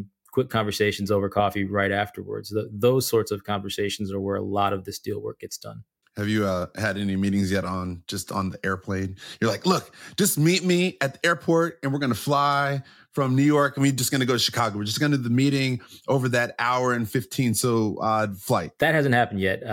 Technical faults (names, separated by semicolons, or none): none